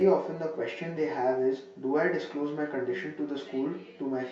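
Throughout the speech, channel delay (comb filtering) gives a hollow, phasey tone: one channel trails the other by around 10 ms, so mono summing cancels shared content near 50 Hz and every 100 Hz above, seen as evenly spaced horizontal dark stripes on a spectrogram.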